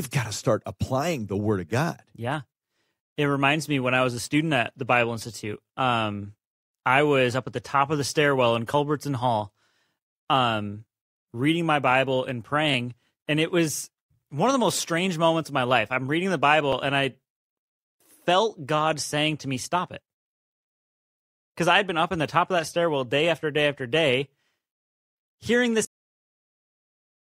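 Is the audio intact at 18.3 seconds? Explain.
Yes, the speech at 18.3 seconds plays through intact, with no dropout, click, distortion or other fault at that moment.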